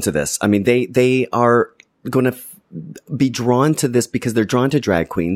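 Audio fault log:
No faults heard anywhere in this speech.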